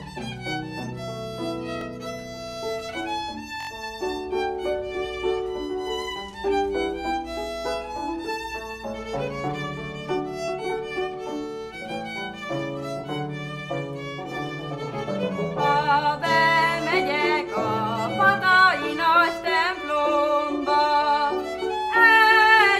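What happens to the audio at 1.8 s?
At 1.81 to 1.84 s there's a repeated buffer: fresh audio didn't arrive in time, so the device replayed its last chunk once more. That chunk is about 21 ms, which fits a 1024-sample buffer. You hear a quick click-like stutter with a hard join, and virtually nothing is lost.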